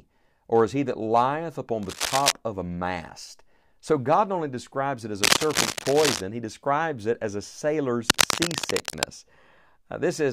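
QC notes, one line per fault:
1.83–2.32 s, 5.23–6.21 s, 8.08–9.06 s: cable scratch noise. Dense, uneven scratching bursts sit over the speech, roughly as loud as it, first after "he that lieth upon" and second after "only describes it as". A worn connector or cable being moved is the likely cause.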